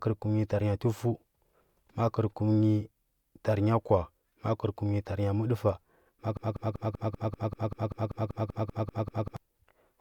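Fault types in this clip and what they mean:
Broken-record loop: from 6.37 s to 9.37 s a 194 ms fragment repeats 15 times back to back, so the speech stutters and the material due in those three seconds is lost; the likely cause is a stalled player or stream resending its last fragment.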